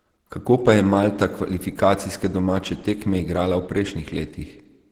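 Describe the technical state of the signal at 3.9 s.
At 3.9 s the speech carries the same Opus compression damage heard across the whole clip. It sounds hoarse and somewhat muffled, with a grainy, rough texture on voiced sounds and noisy fill in the upper range. That is likely the encoder running in its hybrid speech mode at a low rate, around 16 kbps, where it spends few bits on the upper bands and fills them with noise or folded content instead of detail.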